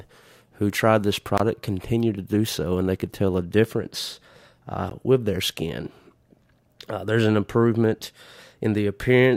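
At 1.38 to 1.40 s, between "who tried this" and "continued to do so", the speech drops into a block of digital silence about 21 ms long, which fits a 1024-sample buffer that was not filled in time. A second, 16 ms dropout follows at 4.90 s, just before "with their skin". The signal switches to zeros and back with no fade, so the speech cuts out and returns abruptly.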